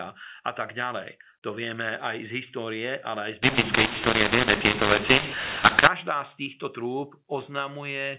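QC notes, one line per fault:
3.43–5.88 s, mu-law and A-law mixed up: the speech turns harsh and gritty, with some levels coming out too loud and others too quiet, and the gaps between syllables fill with a raised hiss instead of falling to silence. The telephone-band audio in this stretch was coded with the mu-law companding curve but decoded as A-law, so each 8-bit code maps to the wrong level. Some samples swell, others shrink, and the quietest are pushed well above silence.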